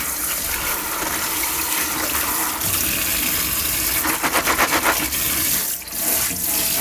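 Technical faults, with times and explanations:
No technical faults detected in this audio.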